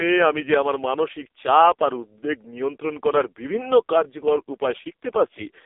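From start to finish the speech carries the sound of the AMR narrowband mobile codec, and the damage is heavy. Everything is squeezed into a telephone band of roughly 300 Hz to 3.6 kHz, with nothing above 3.8 kHz, so the voice sounds thin and boxed-in. The heavy buzzy, synthetic coloration fits one of the lowest AMR-NB modes, around 5 kbps. On a spectrogram there is a hard ceiling near 3.8 kHz with empty space above, and little energy below 300 Hz.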